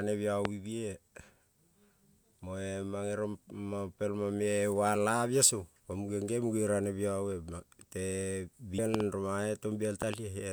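A loud pop hits at 0.45 to 0.47 s as a single sharp click about 25 dB above the speech. It returns as a double pop at 8.94 to 9.02 s, roughly 20 dB up, and again at 10.02 to 10.16 s, roughly 15 dB up. The likely cause is a voltage step from a switch, plug or static, shaped by the circuitry downstream. The waveform shows tall narrow spikes over the ongoing speech, and the spectrogram shows thin vertical broadband stripes.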